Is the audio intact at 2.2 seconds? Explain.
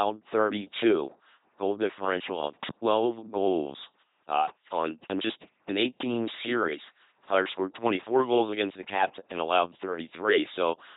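No. At 2.2 seconds, as through the whole clip, the speech is a buzzing, mechanical robot voice with nothing above about 3.9 kHz. That is heavy LPC-10 vocoder damage, consistent with a 2.4 kbit/s stream, where each instant is rebuilt as all-voiced buzz or all-unvoiced noise through a simple vocal-tract filter.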